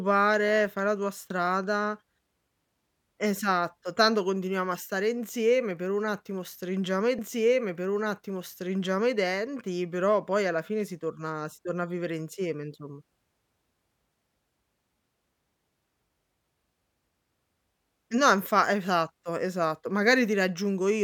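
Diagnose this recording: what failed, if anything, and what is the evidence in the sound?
At 7.18 s, just after "un attimo stringiamo i", about 2 s of speech replays with a small blip at the jump back: a stream segment repeated, queued twice during playback.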